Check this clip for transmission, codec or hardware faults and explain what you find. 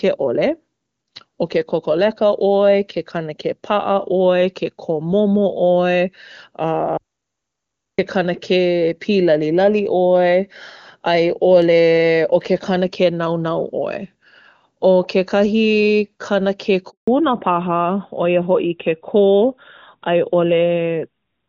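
Three faults are audible in this speech clip: a dropout to silence, a handover gap, and a fall to narrowband coding for the final stretch.

From 6.98 to 7.98 s there is an audio dropout to silence lasting about 1.0 s. The speech stops abruptly and resumes mid-flow, with silence in between and no room tone. That points to a lost input, likely a momentary disconnect or mute.

At 16.90 s a handover gap of 180 ms opens, ending at 17.08 s. The voice decays within a few tens of milliseconds and stays silent. That fits the call switching networks while no speech frames arrived, so the speech from that interval is lost.

From 17.08 s to the end, the call falls back to narrowband. Before the switch, the HD Voice path sounds clean, consistent with a high AMR-WB rate. After it, nothing above 4 kHz remains, consistent with AMR-NB at 12.2 kbit/s, and the voice turns duller and rougher.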